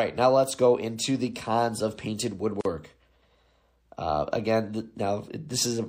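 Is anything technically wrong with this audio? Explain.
Yes. Throughout, the speech sounds watery and swirly with dulled treble and smeared attacks, plainly audible damage that is likely MP3 compression at a low bitrate, roughly 64 kbps.

At 2.61 s, a gap at a join of encoded pieces cuts about 42 ms of silence into the speech. The encoder's start delay and last-frame padding were left in, so the sound stops and then resumes where it left off.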